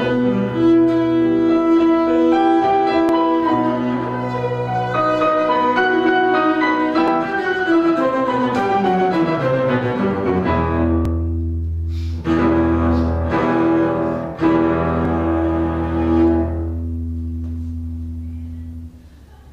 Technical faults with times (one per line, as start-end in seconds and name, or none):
3.09 overlap between stream segments
7.08 overlap between stream segments
11.05 overlap between stream segments
15.05 overlap between stream segments